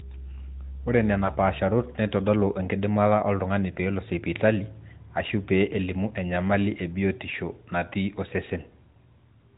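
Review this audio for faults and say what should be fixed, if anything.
Lost AMR speech frames cause a brief dip or warble between 1.26 and 1.33 s. The disturbance is short. It points to a single 20 ms frame that failed its checksum after radio errors. The decoder filled the gap by reusing the last good pitch and vocal tract settings at reduced gain. The sound then recovers, weak or rough for a moment. It rides on narrowband AMR audio with nothing above 4 kHz. Stronger channel error protection or a better radio link would prevent this.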